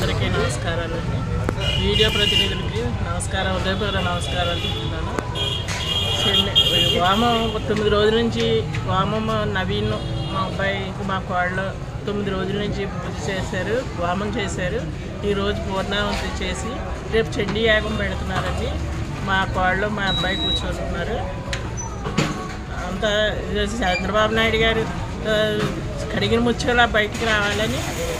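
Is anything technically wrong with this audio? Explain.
No technical faults are audible.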